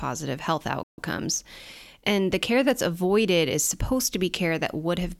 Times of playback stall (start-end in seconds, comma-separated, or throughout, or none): 0.83-0.98